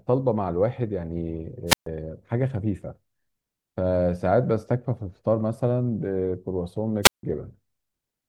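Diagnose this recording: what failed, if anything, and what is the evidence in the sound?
Wireless microphone squelch dropout in the radio link. At 1.67–1.87 s and 7.02–7.23 s, the fading signal trips the squelch, which mutes the speech for 134 and 163 ms.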